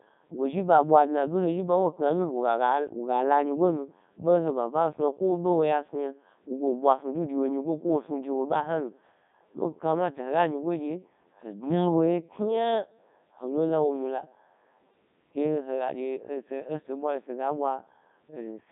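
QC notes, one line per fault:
Throughout: Codec 2 vocoder. The speech has that robotic, buzzy quality because the decoder rebuilds it from sine waves driven by pitch, voicing, energy and a spectral envelope, so none of the original waveform survives. Damage is heavy even though it sounds like the top 3.2 kbit/s mode. The sound sits in a narrow radio band of about 150 Hz to 3.7 kHz, with nothing at all above 3.8 kHz, so it's dull and boxy too.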